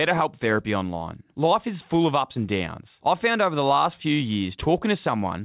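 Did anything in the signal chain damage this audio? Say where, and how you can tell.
No; the call path only band-limits it to 4 kHz.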